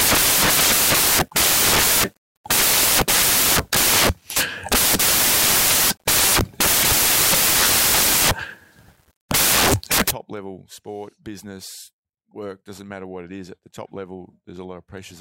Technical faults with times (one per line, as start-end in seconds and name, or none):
0.00-10.11 samples built from the wrong bytes